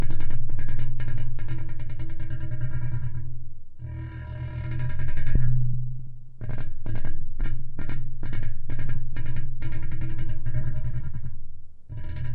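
At 5.35 s, about a second of audio was dropped while later audio was already waiting, and playback resumed with the later material. This skip ahead leaves no filled gap: the sound before and after the cut are spliced almost directly, so the everyday sounds jump abruptly forward in time, with roughly a second of the scene missing and the delay shortened by about the same amount.

From 5.47 s to 12.07 s, the jitter buffer was holding more audio than its target, so it trimmed many short slices, each one or a few pitch periods long, to draw the excess down. Over this stretch the jitter buffer speed-up plays the sounds about 6% fast with pitch unchanged, removing a little under half a second in total. Events arrive slightly hurried and their rhythm feels faintly compressed.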